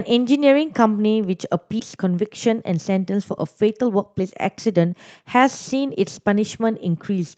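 At 1.79 s about a second of speech was dropped while later audio was already waiting, in a skip ahead, so playback jumps straight forward with no gap or fill, and the sides of the cut are joined almost directly.

From 1.89 s to 7.17 s, the jitter buffer, now holding more than its target, performs a jitter buffer speed-up, repeatedly trimming short pitch-period pieces to shed about half a second. The speech runs at 109% speed at unchanged pitch, sounding hurried, heard through the Opus call path's 8 kHz bandwidth.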